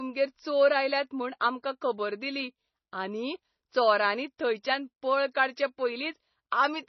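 Heavy bit starvation, likely from MP3 compression at a low bitrate near 24 kbps, cuts everything above 5.9 kHz and switches weak lines on and off, leaving the speech dull, watery and swirly throughout. At 1.39 s, pre-echo spreads quantisation noise across a transform block ahead of a sharp attack, so a brief 16 ms hiss precedes it and the onset sounds smeared.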